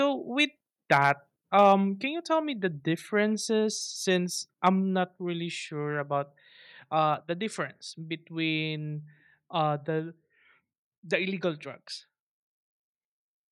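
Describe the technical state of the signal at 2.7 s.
At 2.7 s the speech signal is intact, with no audible fault at that point.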